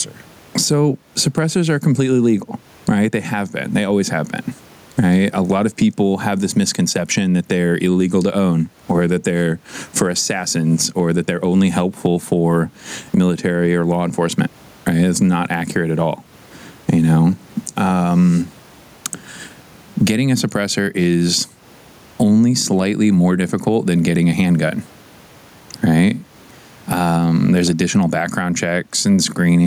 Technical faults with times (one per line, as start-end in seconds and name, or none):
0.00-29.67 gain pumping